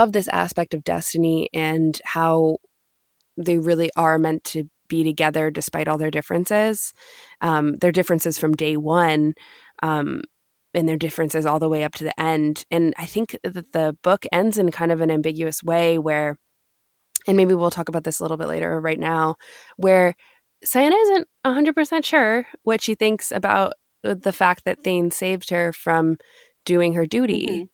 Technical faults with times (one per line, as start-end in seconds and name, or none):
0.95-0.97 lost packet rebuilt from error correction
4.17-4.23 lost packet rebuilt from error correction
7.75-7.81 lost packet rebuilt from error correction
25.59 lost packet rebuilt from error correction